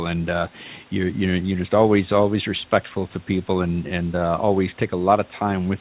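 No technical faults can be heard in this speech recording. The call path is audible in the way a G.711 mu-law link at 64 kbps should be, with nothing above 4 kHz, and the room's background noise sits about 31 dB below the speech.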